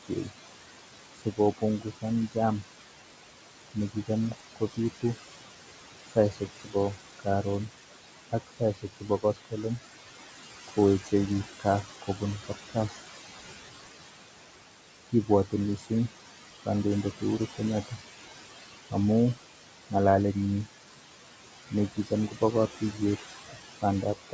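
Noise suppressor artifacts run through the whole of this speech recording: the suppressor pulls down the bands it judges to be steady room noise by about 17 dB, so the background, which sits only about 11 dB under the voice, drops away in the pauses and surges back beneath each phrase. The leftover noise shifts as the gain changes frame by frame, and the voice sits within a band that stops at 8 kHz, as expected for a G.722 call path. Speech cut by the noise suppressor shows up at 0.08–2.65 s, 3.74–5.04 s, 6.1–12.98 s, 15.08–18.94 s and 21.7 s to the end. In those stretches the suppressor mistakes quiet parts of the speech for noise and turns them down by roughly 15 to 18 dB, leaving soft consonants and word endings swallowed or faint, a few hundred milliseconds in each span and about a second in the longest.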